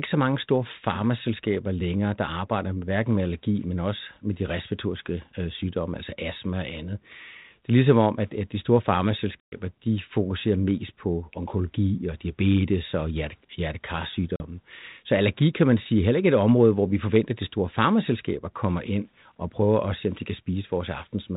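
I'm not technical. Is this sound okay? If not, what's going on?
No. This is packet loss on an ADPCM call. At 9.4 s, right after "at at de store", about 120 ms of speech drops to abrupt silence; a shorter 40 ms gap comes at 14.36 s. After each gap, the decoder is briefly out of step, so the speech returns slightly rough.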